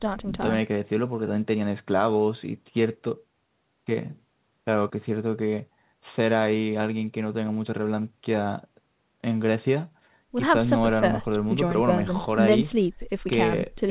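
No technical faults turn up anywhere in the speech, so there is nothing to set out in time order.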